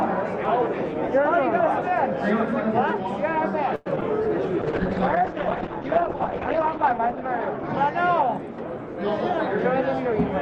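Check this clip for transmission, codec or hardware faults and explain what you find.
The clip has four transmission faults clustered after the first few seconds.

From 3.75 to 3.88 s there is a call audio freeze. The sound stretches into a fading buzz for about 100 ms, then resumes where it stopped. Nothing is lost, but everything after arrives 102 ms later. Packets were likely held up in transit, draining the jitter buffer.

At 3.96–3.99 s and again at 4.01–4.03 s comes short concealed packet loss. Each time, 20 ms of audio never reached the decoder. The receiver extended the preceding sound to cover the hole, then blended back. Each loss is a brief smear or wobble.

From 4.62 to 9.27 s there is a call bitrate drop. The encoder fell from 64 kbps to 8 kbps, bottoming out for about 2.1 s. Coarser coding roughens the sound. Bandwidth shrinks from 20 kHz to 8 kHz, so it turns muffled and watery.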